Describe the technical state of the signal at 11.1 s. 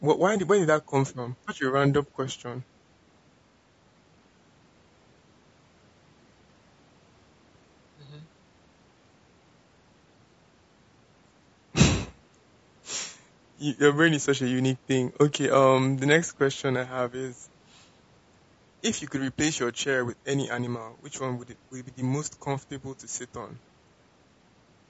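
At 11.1 s, as throughout the clip, the speech sounds rough and grainy, with noise filling the gaps between harmonics. This is likely low-delay AAC compression (AAC-ELD). Its short frames resolve pitch poorly, and the damage points to a low bitrate around 32 kbps.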